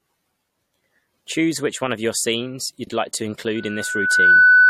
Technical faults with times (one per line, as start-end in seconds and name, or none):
2.84-2.89 frames out of order
3.55-4.69 loudspeaker feedback squeal